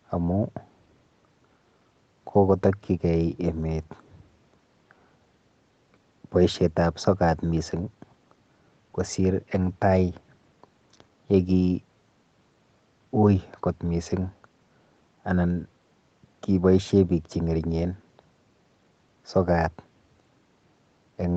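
No technical faults can be heard in this speech recording.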